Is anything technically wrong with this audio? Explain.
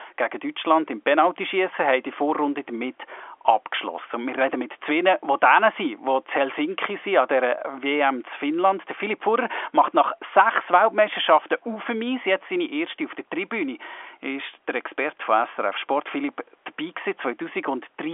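No, nothing in this speech recording points to a technical fault. It has the narrow band of G.711 telephone coding, with nothing above about 3.6 kHz, and faint room noise sits about 44 dB below the speech.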